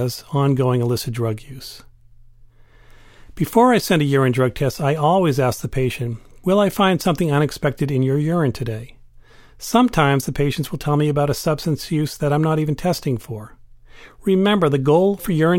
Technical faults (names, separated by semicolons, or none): none